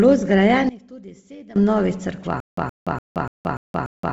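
Throughout the speech, Bluetooth LC3 compression gives a breathy, grainy edge, with nothing above 7.7 kHz and noise-filled highs rather than a clean low-pass, which fits a low bitrate near 24 kbps and 7.5 ms frames.

From 0.69 to 1.56 s, one channel is likely inverted: summed to mono, the voice drops by about 20 dB to a faint residue, never full silence as in a dropout.

From 2.40 s to the end, a stutter with silent gaps, likely a stalled stream, replays the same 119 ms fragment every 292 ms, separated by 173 ms of digital silence. It repeats six times. Unlike random packet loss, the bursts are identical and evenly spaced.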